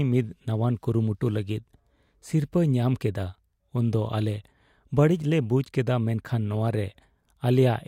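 No technical faults are audible.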